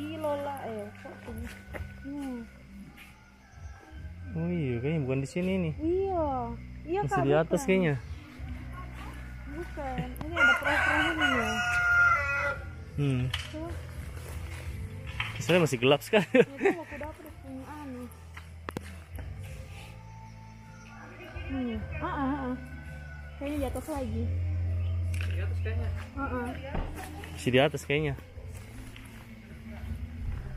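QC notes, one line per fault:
10.21–10.23 s, loud pop: a brief voltage pulse, likely from a switch or static, enters the chain and lands as a single sharp pop roughly 10 dB above the sound, which carries on beneath.
18.69–18.79 s, loud pop: a second pulse gives two pops in quick succession, roughly 15 dB over the sound.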